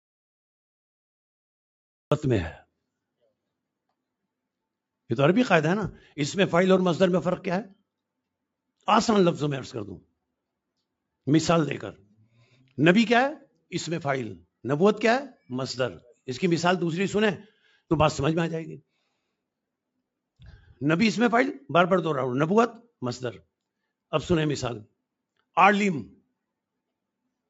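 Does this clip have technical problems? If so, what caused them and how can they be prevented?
Yes. The clip opens already in an audio dropout to silence that lasts until 2.12 s: there is nothing at all, not even room tone, and then the sound starts abruptly in mid-flow. On a waveform this is a flat line; on a spectrogram it is a completely blank block up to 2.12 s, across the whole band up to 8 kHz, where the call processing limits the audio. The likely cause is a lost input, such as a disconnected device, a dropped link or a mute, while the recorder kept writing silence. To prevent it, confirm the input is live and unmuted and the signal is reaching the meters before recording starts.

Shortly after, from 2.52 to 2.69 s, there is a sound cut by the noise suppressor. For roughly 150 ms the suppressor treated part of the sound as noise and pulled it down by about 19 dB at the deepest point, so it dips instead of carrying through. 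On a waveform the envelope sags briefly; on a spectrogram the energy fades to a darker patch there. To prevent it, lower the suppression strength or disable noise suppression when the source is clean.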